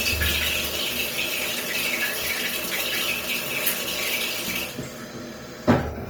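Throughout the whole clip, tones come out noisy, rough and grainy rather than swirly, with the damage plainly audible even though content still reaches about 20.3 kHz. This is likely Opus compression in its CELT music mode, filling starved bands with folded or noise-like energy, at a rate that sounds near 24 kbps.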